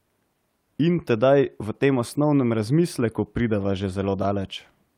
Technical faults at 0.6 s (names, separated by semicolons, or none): none